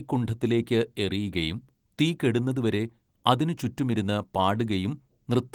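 No faults are audible.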